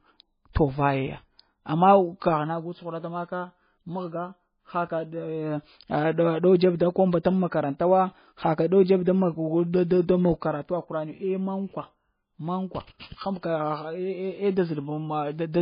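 Throughout the speech, the audio sounds watery and swirly, with nothing above 5 kHz. This points to heavy damage, likely from MP3 compression at a bitrate near 18 kbps. Unlike a plain low-pass filter, weak frequency components flicker on and off between frames, leaving a shifting, metallic texture rather than just dullness.

From 0.53 to 0.55 s, a brief hiss spreads about 20 ms ahead of a sharp attack, which then sounds softened. This is pre-echo. The codec spread noise sized for the loud onset across its whole block, filling the quiet moment before it. Unlike a click or dropout, the noise comes before the attack rather than interrupting the sound.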